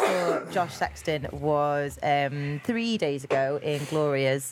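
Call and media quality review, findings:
Nothing stood out on listening, and there is no symptom to log against any component.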